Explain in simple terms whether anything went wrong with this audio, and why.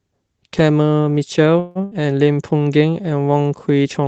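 At about 1.59 s the speech stalls for roughly 160 ms, the last sound stretched into a fading buzz or hiss before picking up where it stopped. This is a call audio freeze, likely caused by packets being held up on the network so the receiver ran out of audio.

Right after, from about 1.84 to 1.94 s, comes a short held buzz or fading hiss and a jump ahead. That is a burst of packet loss: about 80 ms of speech never arrived, and the receiver filled the gap with a fading copy of the last sound.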